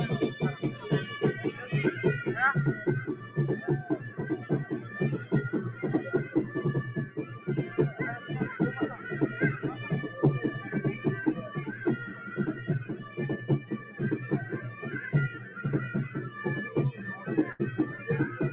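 Non-speech audio carried over a narrowband call link (nothing above 4 kHz, which fits G.711 mu-law at 64 kbps) shows a noise suppressor applied to music or sounds throughout. A speech-tuned suppressor treats steady tones, ambience and decay as noise, so level swings by roughly 10 dB as attacks pass and sustained parts sink. A compressor would also pump, but it follows overall loudness. This follows how steady the sound is, so it pumps and thins exactly where the material holds still. The sharpest cases are sound cut by the noise suppressor at 3.13–3.37 s (about 7 dB down), 7.06–7.48 s (about 8 dB), 12.92–13.18 s (about 7 dB), 13.6–13.98 s (about 8 dB) and 15.39–15.55 s (about 5 dB). In each, held or fading content drops or has its tail clipped while transients survive. A gate would shut fully on quiet passages, but these dips land on sustained sound regardless of its level. At 17.52–17.61 s a burst of packet loss occurs. 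For about 73 ms the receiver stretches the last sound and fades it, and then playback resumes roughly 80 ms further on with that stretch gone. Unlike a plain dropout to silence, the gap is filled with a decaying continuation, and unlike a click it is followed by a jump in the sound.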